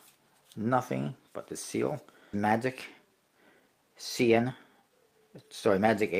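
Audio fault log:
2.33 to 2.35 s, skip ahead: the sound jumps abruptly forward with no gap, so about a second of audio is simply missing and the two sides are butted together. Later audio was already queued, so the stretch was dropped, in transit or by the receiver's overflowing buffer, and playback resumed further on.
2.45 to 5.86 s, jitter buffer speed-up: the sound runs noticeably hurried, about 13 percent fast, yet its pitch stays unchanged. The receiver's buffer had built up excess delay and trimmed many tiny pitch-period slices in succession, removing somewhat under half a second overall.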